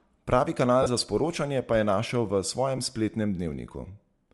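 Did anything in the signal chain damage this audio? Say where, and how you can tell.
Yes. Codec stage, throughout: a plainly grainy, breathy edge on the speech is likely Bluetooth LC3 compression, which zeroed upper spectrum and refilled it with noise.

Lost LE Audio frames at 0.82–0.86 s and 2.77–2.80 s, a wireless-link stage: concealment replayed the last spectrum with random signs, covering 5 frames (37.5 ms) and 2 frames (15 ms).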